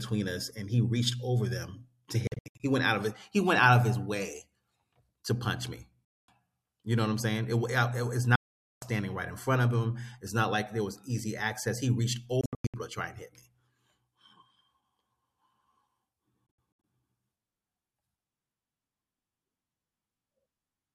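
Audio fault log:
2.27 to 16.84 s, Bluetooth dropout: silences at 2.27–2.60, 6.05–6.28, 8.35–8.82, 12.41–12.74 and 16.46–16.84 s, the first, fourth and fifth broken into gaps of up to 93 ms. Packets likely reached the headphones too late and were dropped, so the sound resumes further on, as if it had kept playing.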